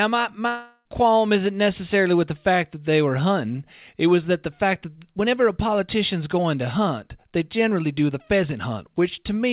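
From 0.48 to 0.86 s the speech turns into a buzzy continuation of the last sound that fades over 0.37 s into a brief silence, likely a long network dropout. Unlike a short packet-loss glitch, it lasts far longer, and the missing audio never comes back.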